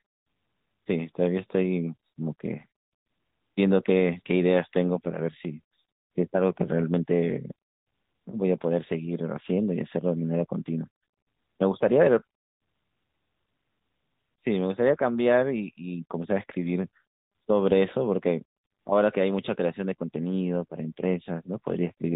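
Throughout the clip, the speech has passed through the AMR narrowband mobile codec, AMR-NB, at a rate that fits its 10.2 kbps mode. The signal was reduced to 8 kHz sampling and rebuilt from a vocal-tract model driven by a few pulses per 5 ms subframe, so nothing above 4 kHz survives. The result is a boxy, telephone-band voice with a plainly audible buzzy, synthetic edge.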